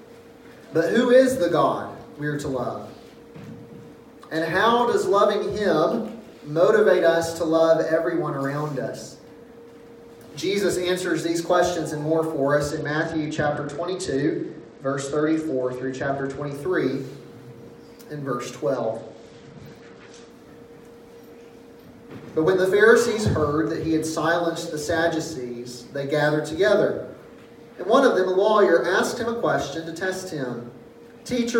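At 12.70 s the sound turns dull and gritty until 16.55 s, then again from 18.74 s to 20.30 s. Both are a Bluetooth SBC bit pool drop. A congested link starved the encoder, which fits a bit pool falling from 31 to 11 at about 83 kbps. High bands lost their bits, and coarse quantisation added grit.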